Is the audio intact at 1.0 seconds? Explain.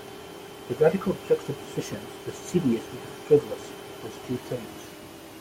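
Yes, at 1.0 seconds the speech plays through cleanly, with no dropout, click, distortion or other fault.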